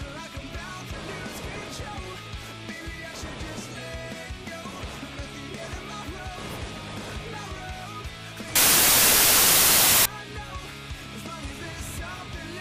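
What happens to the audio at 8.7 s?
At 8.7 s the audio falls inside a stretch of samples built from the wrong bytes, running from about 8.56 s to 10.06 s. The bytes of each sample are assembled in the wrong order or alignment, so the rapidly varying low bits dominate. The result is a burst of loud, harsh broadband noise.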